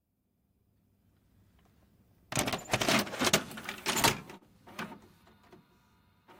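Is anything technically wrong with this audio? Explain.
Yes, there is a short stall from a late packet between 4.37 and 4.43 s. A packet arrived late and the jitter buffer ran empty, so the receiver stretched the last sound for about 39 ms, then resumed where it left off. Unlike packet loss, nothing is skipped; the sound is briefly held with a slight buzz or dip, and everything after plays 39 ms later.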